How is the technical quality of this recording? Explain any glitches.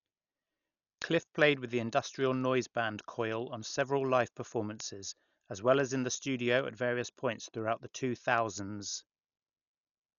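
The technical quality is poor: the speech sounds heavily coded the whole way through, with a steady run of ticks laid over it.

Throughout, the audio is dull. There's nothing above about 6.9 kHz, and a rough, fluttery noise sits around the voiced parts. That's likely Dolby Digital compression pushed hard. At a low bitrate the encoder narrows the band and leaves many frequency lines with no real detail, then the decoder fills those gaps with noise. The amount of damage here points to something as low as 48 kbps.

From 0.22 s to 10.17 s there are word clock ticks, sharp clicks of uneven strength about every 0.2 s, roughly fifty in all. The receiving device was running on its own clock rather than locking to the sender's, and the two drifted apart by something like a hundred parts per million. Each time they slipped past each other, one sample was dropped or repeated, and that slip is what makes each tick.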